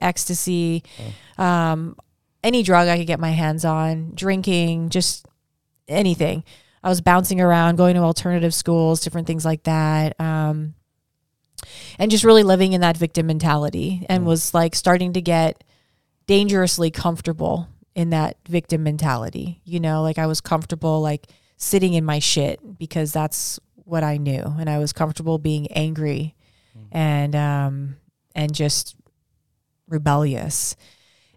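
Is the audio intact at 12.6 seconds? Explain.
Yes, the audio is intact at 12.6 seconds, with no fault audible at that point in the speech.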